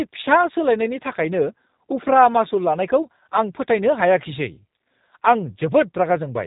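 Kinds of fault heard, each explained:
G.729 codec: a low-rate VoIP coder rebuilding speech from a vocal tract model and sparse pulses, leaving it plainly rough and synthetic, with nothing above 3.8 kHz.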